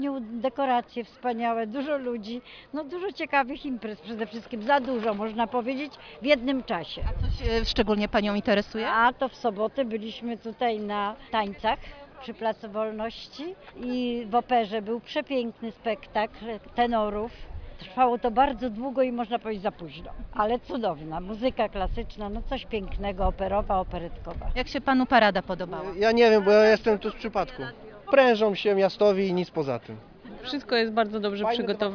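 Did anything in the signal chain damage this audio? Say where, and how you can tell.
No, nothing in the chain damaged this audio.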